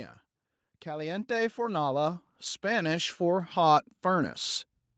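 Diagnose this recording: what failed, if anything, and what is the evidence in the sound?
The failure is automatic gain rising in the call processing stage. From about 0.83 s the level starts creeping up, and by 4.41 s it's roughly 13 dB louder, with the voice and the background noise swelling together rather than the speech alone getting louder. That's the AGC deciding the input was too quiet and ramping its gain slowly over several seconds. The missing content above 8 kHz fits the call codec's bandwidth, likely Opus at around 24 kbps.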